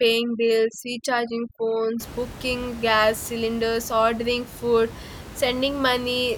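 From 0.0 to 2.0 s, just before "booking gas cylinders ordering", the background drops and breaks up into twinkling specks. This is overdone noise removal: a noise reducer set too strong shuts off individual frequency bands near its noise estimate, taking quiet parts of the speech along with the room noise, which otherwise sits about 16 dB below the speech.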